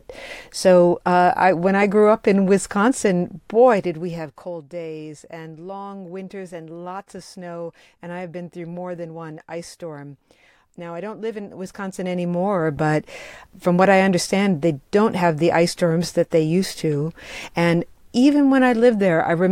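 A speech recording with no technical faults to point to. The level is turned down or back up smoothly during the clip, but this is normal rather than a fault.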